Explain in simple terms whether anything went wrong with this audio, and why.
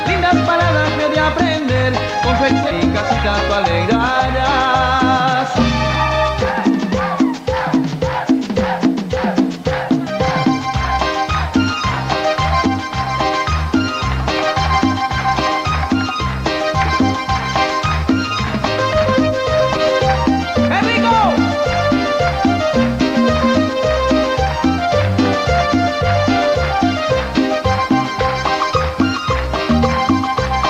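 Nothing went wrong here: the recording holds steady the whole way, with no dropouts, no sudden jumps in level, and nothing added or taken away that would point to a technical problem.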